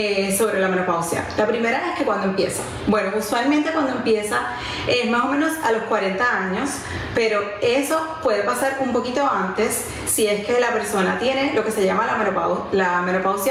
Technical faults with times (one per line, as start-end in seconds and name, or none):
0.00-13.51 gain pumping